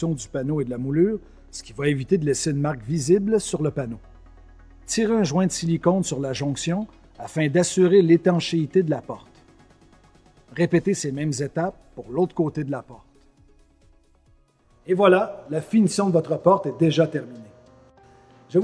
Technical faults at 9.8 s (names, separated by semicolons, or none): none